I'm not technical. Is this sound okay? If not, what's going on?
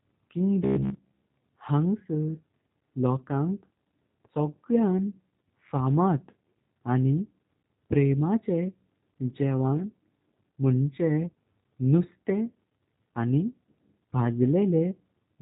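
No. The speech was squeezed through the G.729 codec, a compression method built for internet phone calls. Rather than storing the actual sound, it sends a rough description of how the voice was shaped and rebuilds it from that at the other end. Throughout the whole clip this leaves the speech plainly rough and slightly synthetic, and nothing above about 3.8 kHz survives, so it sounds thin and muffled, like an old phone line.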